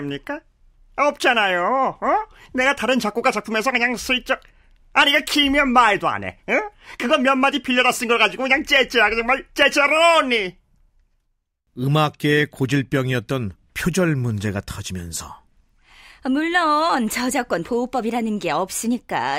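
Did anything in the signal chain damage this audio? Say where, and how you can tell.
No, nothing in the signal chain damaged this audio.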